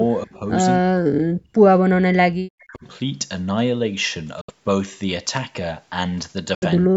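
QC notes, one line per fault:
0.26–0.43 s, 0.79–1.53 s, 1.85–2.84 s and 6.88 s to the end: speech suppressed in double talk. The speech level sinks, by about 10 dB in the first short dip and by about 40 dB in the longer ones, where it nearly vanishes, likely because the far side was talking and the echo canceller turned the near talker down along with the echo. These are dips lasting from about 100 ms to about a second, and the sound carries on through them.
0.35–0.39 s: echo leak. A faint delayed copy of the speech, about 35 dB below it, trails the original by 256 ms. It is likely loudspeaker pickup that the echo canceller failed to remove. It overlaps the first suppression dip. Unlike the dips, which take level away, this adds a second, later image of the sound. It is brief and very quiet.
4.41–4.50 s and 6.55–6.63 s: Bluetooth dropout. Each time the output goes completely silent for about 70 ms, which fits roughly three lost packets, likely because the wireless link failed to deliver them in time. 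The speech resumes further along, as if it had kept playing during the gap. That sets these apart from the double-talk dips, which fade the level down and lose nothing of the timeline.
5.37 s: loose connector crackle. There is a single short burst of scratchy, irregular crackle lasting about 10 ms, from a contact making and breaking rapidly. It is rough and noisy rather than silent, which distinguishes it from a dropout. It is also too brief and isolated to be the clicks of a steady codec fault. The call's microphone processing is audible as a band limit, with nothing above 8 kHz.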